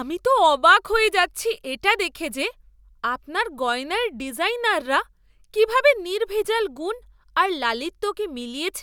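Speech recording; no technical faults detected anywhere in the clip.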